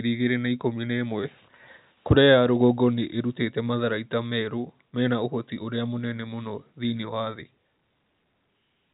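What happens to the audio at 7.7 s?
Nothing goes wrong at 7.7 s: the speech there is intact, carried through the same telephone-band G.711 coding as the rest of the clip, with no dropout, click or distortion at that moment.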